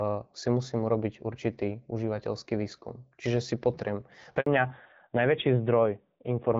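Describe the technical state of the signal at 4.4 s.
At 4.40 s there's a handover gap: the call hops networks and no speech frames arrive for about 60 ms, up to 4.46 s. The speech dies away within a few tens of milliseconds and there's plain silence until the new link picks up, so whatever was said in that sliver is gone.

Right after, from 4.46 s to the end, you get a fallback to narrowband. The HD Voice sound before the gap fits AMR-WB at 12.65 kbit/s. After the gap nothing is left above 4 kHz, so the speech turns duller and rougher, which points to AMR-NB at around 7.4 kbit/s.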